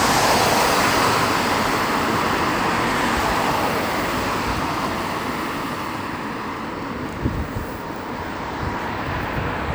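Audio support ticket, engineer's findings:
Engineer's findings: no audio fault heard in this ticket's clip.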